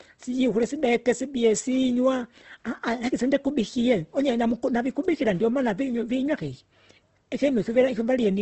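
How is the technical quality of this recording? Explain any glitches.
The recording is held back by audible compression damage that runs through the whole speech clip.

Opus compression, likely, across the full clip: when too few bits are available, each frequency band's energy is preserved but its fine detail is filled in by copying lower bands or with noise. Here that leaves the speech sounding grainy and rough rather than swirly, with nothing above 8.2 kHz. The narrowed bandwidth and plainly audible texture point to a low bitrate around 16 kbps in the codec's music-oriented mode.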